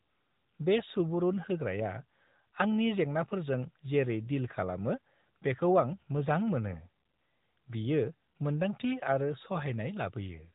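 Speech runs through the AMR narrowband mobile codec from start to finish: nothing above 4 kHz survives, and the voice has a plainly audible buzzy, synthetic edge from pulse-driven vocal-tract modelling. The damage level fits mid-rate AMR-NB around 10.2 kbps. A plain low-pass filter would dull the sound but leave it natural.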